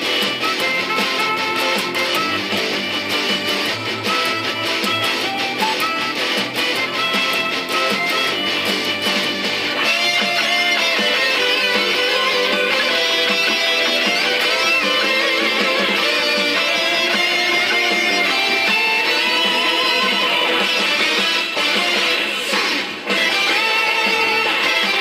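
Sample clock jitter runs through the whole sound: the converter's timing wanders by a few microseconds, so each sample's error grows with the waveform's slope. The result is a hiss-like roughness roughly 25 dB below the signal, strongest on loud, bright passages and absent in silence.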